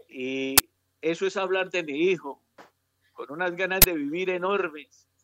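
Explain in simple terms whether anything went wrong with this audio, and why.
Two harsh bursts of digital noise, at 0.58–0.60 s and 3.82–3.84 s: an uninitialised buffer, where the player played a 1024-sample block before any real audio reached it.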